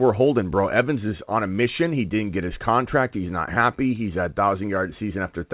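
No technical faults are audible.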